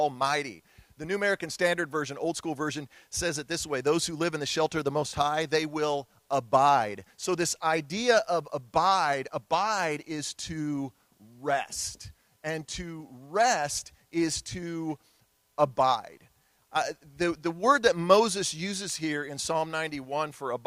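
Nothing stood out as a technical fault on listening to the recording.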